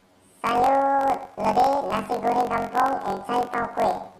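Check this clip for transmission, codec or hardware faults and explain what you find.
There's one fault, and it runs through the whole speech clip: planar audio read as interleaved. The data comes in 21.77 ms blocks. Each block stores all left samples, then all right, but gets read as alternating pairs. So every block plays twice at double speed, left then right, pushing the speech up 12 semitones, a full octave, with a buzzy flutter at about 46 Hz.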